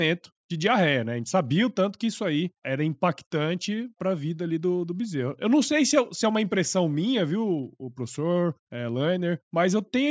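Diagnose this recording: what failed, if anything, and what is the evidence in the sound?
Nothing failed: no stage from capture through playback leaves an audible fault anywhere in this speech recording.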